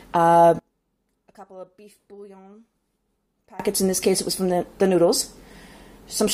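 From 0.59 to 3.60 s the level drops by about 26 dB, leaving only a faint residue, likely one channel inverted cancelling against the other when summed to mono.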